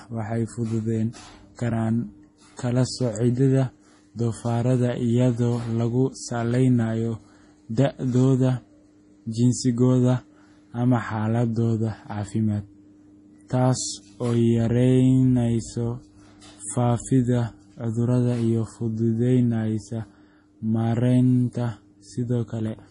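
Heavy MP3 compression, likely at a very low bitrate that fits 32 kbps, affects the whole clip. Short of bits, the encoder removes everything above 10.6 kHz and lets weak frequency lines flicker between frames. The speech sounds dull and watery, with chirpy s sounds and smeared attacks.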